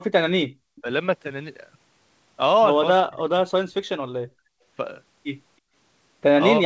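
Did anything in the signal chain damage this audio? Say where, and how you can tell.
Yes. Background gated by the echo canceller at 0.49–0.54 s and 4.3–4.64 s: the room floor drops about 40 dB, showing as near-silent vertical notches in the waveform.

An echo leak at 0.76–0.81 s: a very faint copy of the speech, delayed 326 ms, likely residual loudspeaker pickup the canceller missed, visible as a weak repeated spectrogram pattern.

Speech suppressed in double talk at 0.82–0.86, 3.03–3.42, 3.59–4.02 and 6.59–6.65 s: speech sags or gaps, up to roughly 40 dB, likely canceller suppression, as blanked envelope sections.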